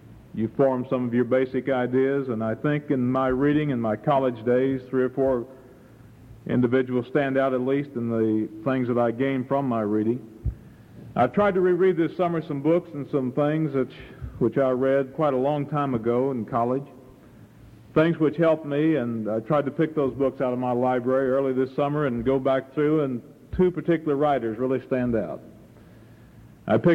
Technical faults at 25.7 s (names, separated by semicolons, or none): none